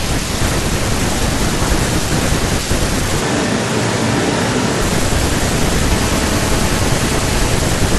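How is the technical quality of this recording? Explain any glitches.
One glitch stands out. From 3.23 to 4.8 s the speech abruptly turns roomy and hollow with thinner bass, level unchanged and room noise around 35 dB down, then snaps back, likely a switch to a distant microphone.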